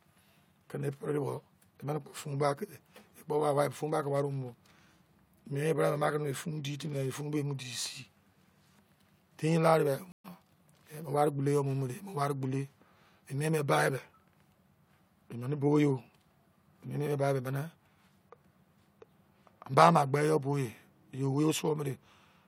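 At 10.12 s the speech drops out for 122 ms. This is a stream reconnect. The connection broke, and the player restarted decoding mid-stream. At 10.26 s the speech resumes about a tenth of a second later, so a small piece is skipped.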